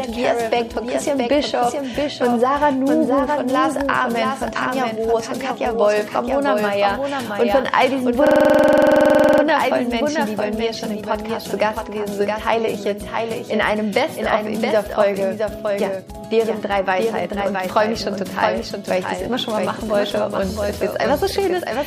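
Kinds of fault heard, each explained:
Doubled audio track: a second full-band copy, about 5 dB quieter, trails roughly 0.7 s behind throughout, likely from two capture paths; unlike echo, it has no decay or room colour.
System hang loop: from 8.27 to 9.43 s, one 46.44 ms slice repeats exactly 25 times, a 21.5 Hz stutter that fits a 2048-sample buffer, not a random glitch.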